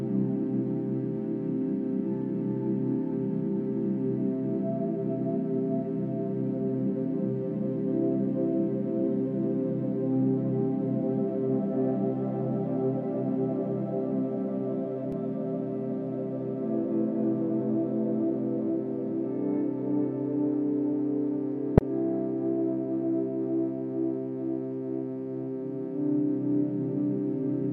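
Corrupt frame decoded at 15.12 s and 21.78–21.81 s: a faint blip, then a loud burst, as damaged compressed frames played with misread gains and codes.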